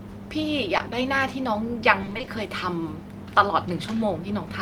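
At 0.77 s, about 20 ms of the speech stream failed to reach the decoder in time, a short concealed packet loss. The receiver bridged the hole by extending the sound just before it and then crossfading back into the real signal by 0.81 s. This is heard as a brief smear or wobble.

From 2.01 s to 2.29 s, packets went missing over and over, producing repeated packet loss with a robotic sound. The dropouts are each up to 20 ms long and add up to 140 ms, half of that stretch. The decoder keeps patching each hole by continuing the previous sound, and the next hole arrives before the speech can settle. The passage comes out choppy, with fragments of speech missing.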